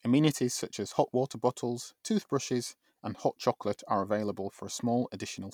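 No technical faults can be heard at any point in this speech recording. Nothing audible in it calls for a fault description.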